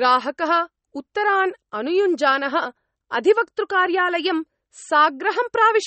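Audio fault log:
Throughout, MP3 compression: a low-bitrate encoder, likely running near 32 kbps, has run short of bits, so the treble is cut off with nothing above 8.4 kHz, and weak frequency detail flickers between frames, leaving the speech plainly watery and swirly, with smeared consonant attacks.
0.57 to 5.74 s, clock slip clicks: two devices are likely running on unsynchronised clocks, around 50 parts per million apart, so a single sample is dropped or repeated about every half second. That gives roughly ten faint, evenly spaced ticks across this stretch.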